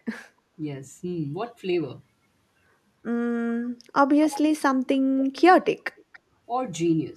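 From 5.18 to 5.42 s, and again from 5.97 to 6.19 s, a faint copy of the speech returns about 280 ms late. This is echo leak. A far-end echo canceller likely let its loudspeaker's sound slip back. The second copy sounds quieter still.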